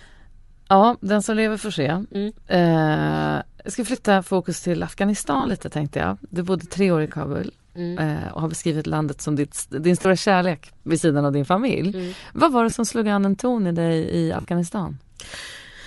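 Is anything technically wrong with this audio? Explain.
Yes. Throughout the speech there is a breathy, grainy edge on the upper frequencies, plainly audible, and it is likely Bluetooth LC3 compression. This transform codec works in short blocks and, at a rate that fits roughly 48 kbps with 10 ms frames, discards much of the fine high-frequency detail and fills the gaps with shaped noise. Sibilants and the top of the voice come across hissy and granular rather than crisp.

There are also lost LE Audio frames at 2.12 to 2.15 s (after "som lever får se"), 3.72 to 3.74 s, 5.35 to 5.51 s (between "ska flytta fokus till" and "tänkte jag"), 7.07 to 7.11 s, 10.02 to 10.05 s, 12.70 to 12.72 s (between "var det" and "som slog an en"), and 14.38 to 14.48 s. When frames go missing, the decoder repeats the last spectrum with randomised phase, so each gap of 20 to 80 ms is heard as a brief noisy smear in place of the voice. 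The 5.35 s event is a scatter of short dropouts over 160 ms, the longest about 20 ms. The 14.38 s event spreads over 100 ms, with its longest run about 50 ms.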